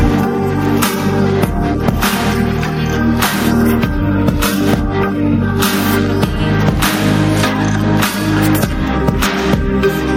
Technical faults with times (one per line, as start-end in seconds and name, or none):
0.00-10.16 gain pumping